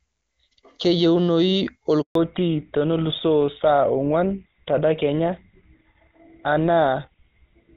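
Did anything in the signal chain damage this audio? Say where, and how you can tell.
Yes. At the network stage there is a handover gap from 2.01 to 2.15 s. The speech dies away within a few tens of milliseconds and a flat 140 ms silence follows before sound resumes. That shape, with no noise and no partial frames, fits a call being moved between networks with no speech frames delivered during the switch. Whatever was spoken in that window never reached the receiving end and cannot be recovered.

At the codec stage the call falls back to narrowband from 2.15 s to the end. Before the gap the wideband HD Voice codec carries full, crisp speech with faint or no coding damage, which fits AMR-WB at its top rate. After it, nothing above 4 kHz remains. Sibilants lose their edge and the sound turns duller and rougher, which points to the link renegotiating onto an older narrowband codec such as GSM full rate.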